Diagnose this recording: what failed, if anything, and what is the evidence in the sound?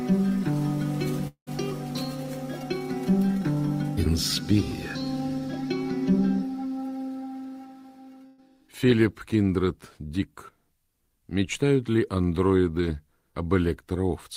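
Around 1.27 to 1.49 s the sound stops arriving and the last bit of it is stretched into a buzz or hiss that fades toward silence. When it resumes, about 200 ms is simply gone. That points to the network stage, likely a long network dropout with the receiver's concealment filling the hole.

The burst of packet loss at 8.27 to 8.41 s is a shorter version of the same network problem. The final sound is held and turned down for about 113 ms without ever going silent, then playback jumps forward past roughly 120 ms of missing audio.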